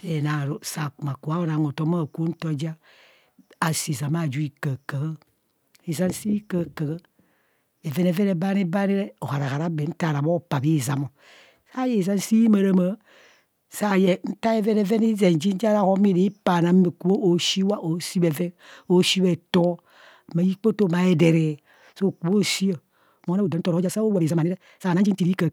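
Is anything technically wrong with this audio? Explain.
Yes. From 23.14 s to the end at 25.53 s, the speech contains a time-stretched section. The pace jumps abruptly to about 1.69 times normal speed, yet the pitch does not rise. The likely cause is software squeezing this stretch to fit a shorter length. It keeps the pitch by cutting out tiny slices of the waveform and joining the rest. Those removed slices make the ending sound rushed.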